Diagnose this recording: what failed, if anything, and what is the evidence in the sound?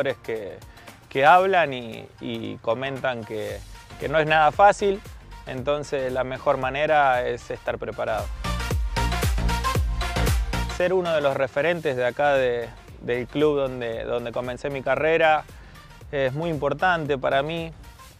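Nothing failed at any stage: the sound holds steady from the first second to the last, with no audible evidence pointing to the wiring, converter, buffering, format handling, processing, transport, storage or playback.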